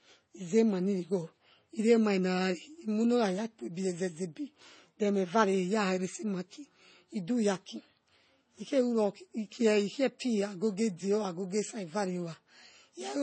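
From start to finish the speech sounds dull, with nothing above about 8.3 kHz, and two layers of coding artefacts sit on top of each other and are heard together. This is most likely transcoding between lossy codecs. The pattern points to an MP3 encode followed by an AAC-LC encode, both at low bitrates around 32 kbit/s. The second encoder spends bits on the first one's damage and adds its own, while the lower cut-off stays in place.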